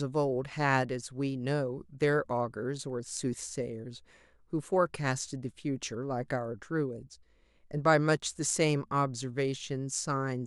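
Nothing in this speech recording stands out as a technical problem, so there's no fault to point to at any moment.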